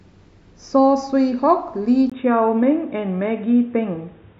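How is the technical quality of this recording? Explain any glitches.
The recording starts out fine and then drops in quality partway through. At 2.10 s there's a brief 20 ms gap, and from there to the end the speech loses everything above 3.8 kHz and turns dull and boxy. A faint new background noise also comes in, well below the speech, while the loudness stays about the same. That's most likely the input switched to a poorer device, with the system swapping to a narrower-band microphone or headset profile mid-recording.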